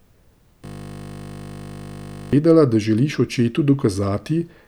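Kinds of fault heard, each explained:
System hang loop, 0.65 to 2.33 s: the computer or its audio driver stopped supplying new audio while the sound hardware kept replaying the last 20 ms held in its ring buffer. That tiny slice of the speech repeats exactly, over eighty times, so for about 1.7 s the speech gives way to a steady buzz at 50 Hz, the loop rate. Speech resumes with "da želiš očetu".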